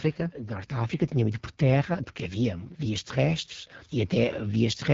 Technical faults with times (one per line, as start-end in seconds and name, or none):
0.00-4.94 AMR wideband (HD Voice) codec